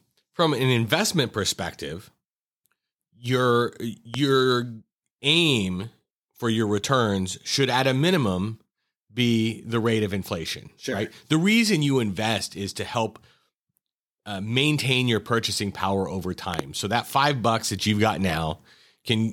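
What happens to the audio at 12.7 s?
Nothing goes wrong at 12.7 s; the speech carries on without any audible fault at that moment.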